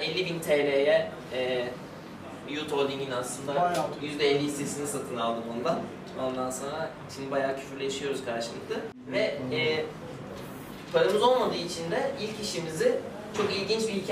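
No technical faults can be heard anywhere in the clip.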